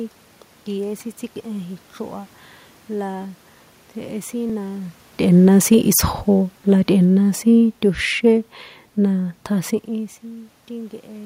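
At 4.50 s, just before "na tꞌe̱na", a repeated buffer occurs: fresh audio failed to reach the output in time, so the device played its previous 5.33 ms block a second time. That short length fits a 256-sample buffer, and the doubled slice is too brief to hear as a stutter, so it comes through as a click or brief buzz. Essentially no audio is lost. On a waveform, a tiny segment appears twice with a hard step at the seam. A spectrogram shows a thin vertical broadband line.

From 6.70 s to 9.46 s, automatic gain falling sets in. The gain control judged the input too hot or its background noise too strong and eased its gain down by about 4 dB across those nearly three seconds, so the speech gradually sinks and the room noise beneath it drops in step. This differs from the talker moving near 5.0 s and 9.5 s, which shifts only the voice. The waveform envelope tapers steadily, and the spectrogram dims evenly across all frequencies, noise floor included.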